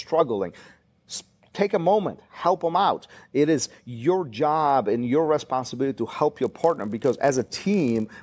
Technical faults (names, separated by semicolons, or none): resampler restarted on every block